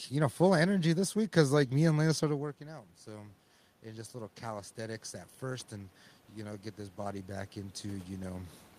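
From 2.25 s to 8.61 s the automatic gain control is rising. Just after the talker moves back from the microphone around 2 s, the level at the input drops by about 13 dB, and the gain control slowly climbs by about 11 dB over the next six seconds to make up for it. The giveaway is that the room noise swells upward along with the voice. A talker simply moving would change only the voice, leaving the background steady.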